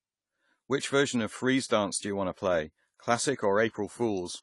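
From start to finish, the speech carries AAC compression damage, and it is plainly audible. Nothing sounds above 11.4 kHz, so the top of the spectrum is simply gone. That hard ceiling dulls the speech. The encoder cut the highest band to save bits. It then quantised what remained against a hearing model, which leaves audible damage behind. The cause is likely AAC-LC encoding at a low bitrate. The sound fits a rate of about 32 kbps.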